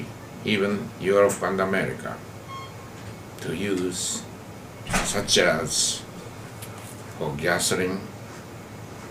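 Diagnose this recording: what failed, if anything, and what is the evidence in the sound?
Nothing failed; no faults are audible anywhere.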